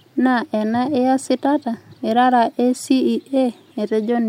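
Listening closely to the speech, nothing stood out as a technical problem at any point.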